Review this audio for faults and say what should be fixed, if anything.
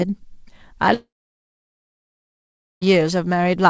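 From 0.94 s to 2.83 s the speech cuts out, most likely from a long network dropout. The receiver stretches the last sound into a fading buzz, then leaves about 1.75 s of near silence, and the speech resumes further on with about 1.9 s of content skipped. A short packet-loss glitch would recover within tenths of a second without losing words, and a natural pause would not start with that fading buzz. The audio stops at 8 kHz, which fits the call codec's wideband limit. Prevention: stabilise the network link and add redundancy or forward error correction so a long outage does not drop the stream.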